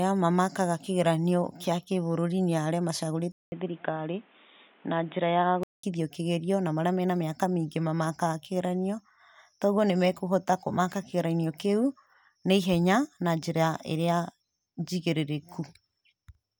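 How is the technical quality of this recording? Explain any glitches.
The recording has one clear glitch. From 3.32 to 5.83 s, right after "kĩa kĩbũrũri nĩ arĩa", the input likely switched to a poorer device, such as a second microphone or a headset in call mode. That device passes nothing above 3.8 kHz, so the speech turns dull and boxy. A gap of about 0.2 s marks the switch, and a faint new background noise sits well under the speech while the level stays roughly the same. Full clarity returns before "kĩgerio na marĩa mena".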